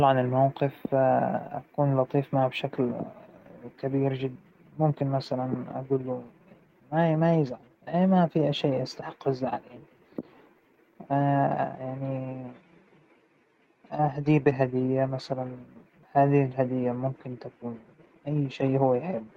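At 4.35 s the speech skips ahead. Roughly 0.7 s of audio never plays. It was dropped in transit or by an overfull jitter buffer while later audio waited. The two sides join with no gap, so syllables vanish abruptly.

From 4.45 to 6.47 s comes a jitter buffer speed-up. The buffer held too much audio, so the receiver cut many short pitch-period pieces in a row. About 0.3 s goes. Speech runs at 114 percent, pitch unchanged, and sounds hurried.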